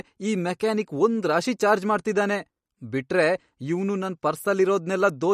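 MP3 compression runs throughout the speech. Nothing is present above 15.1 kHz, and a plainly audible watery swirl comes from weak frequency lines switching on and off between frames. This is likely a bit-starved encoder, and the damage fits a bitrate near 48 kbps.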